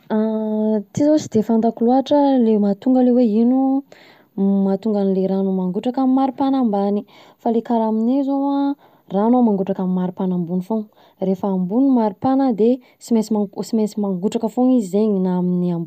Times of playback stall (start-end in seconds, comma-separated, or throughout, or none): none